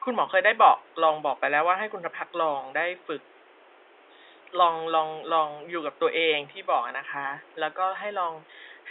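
No technical faults are audible.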